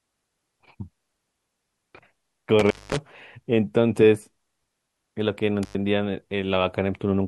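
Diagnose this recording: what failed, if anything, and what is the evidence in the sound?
Intermittent contact in the analogue wiring: the speech drops out twice, at 2.59 to 2.99 s with about 194 ms fully open, and at 5.63 to 5.75 s with about 100 ms open, each gap bounded by crackle and filled with faint hiss. A loose cable or plug is briefly breaking the signal path.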